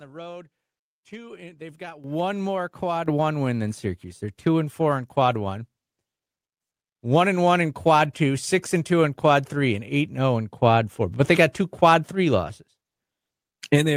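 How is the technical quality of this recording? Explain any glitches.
There are two level jumps in the recording, both from the microphone volume being stepped up. At 2.04 s the whole signal jumps by about 10 dB, then again by about 5 dB at 3.06 s. The call software judged the mic too quiet and raised the input gain in one step each time, so the speech and the background noise get louder together, abruptly.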